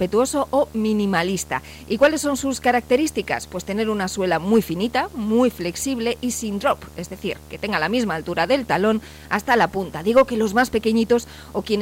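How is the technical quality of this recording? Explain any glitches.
The recording has one fault, present from start to finish. Video or display buzz runs throughout. A screen or video cable couples into the audio path. It leaves a 75 Hz buzz with hash above it, sitting roughly 25 dB below the sound.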